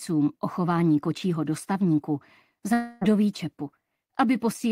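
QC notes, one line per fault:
2.73–3.03 s, long network dropout: about 0.3 s of audio is replaced by a smeared continuation of the preceding sound, fading as a buzz without ever reaching silence. The sound then resumes further on, likely because packets stopped arriving and the receiver concealed the gap.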